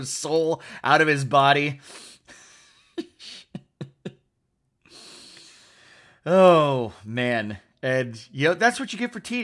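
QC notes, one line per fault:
Throughout: resampler restarted on every block. The 48 kHz to 24 kHz conversion appears to run on 40 ms blocks. Each block edge lacks its true neighbouring samples, leaving a small error. The result is a 25 Hz tick or buzz, heard only while speech is present.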